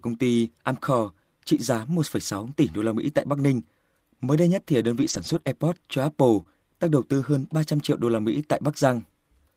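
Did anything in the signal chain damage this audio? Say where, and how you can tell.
Yes, at the network stage. Lost packet rebuilt from error correction shows at 5.01 to 5.39 s, right after "đây nhất thì đơn", then at 5.45 to 5.47 s and 6.39 to 6.41 s. There is no gap, but those stretches sound rougher and noisier. The decoder played low-bitrate copies carried in the following packets.

Short concealed packet loss also comes from the network. It falls at 5.41 to 5.45 s and 6.43 to 6.47 s, just before "đang đầu tư hơn". Each hole is about 20 ms. The receiver extended the previous sound to fill it, then blended back, leaving a brief smear or wobble.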